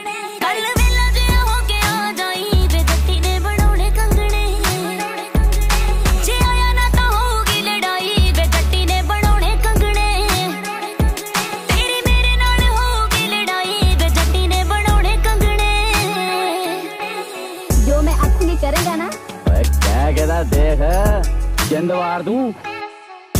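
No technical faults are audible anywhere in this audio.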